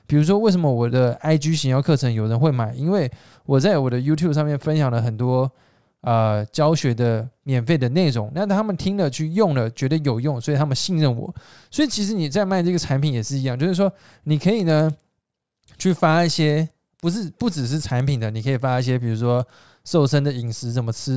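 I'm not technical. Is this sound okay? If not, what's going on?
No. From about 14.6 to 19.6 seconds there is a fault called a resampler restarted on every block. The speech was converted to a different sample rate one short chunk at a time, each about 100 ms long. The converter treated each chunk as if nothing came before or after it. So every chunk edge gets a tiny glitch. You hear a steady ticking, about ten per second, but only while someone is talking.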